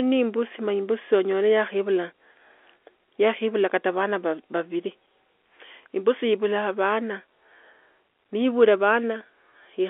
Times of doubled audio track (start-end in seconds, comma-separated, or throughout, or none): none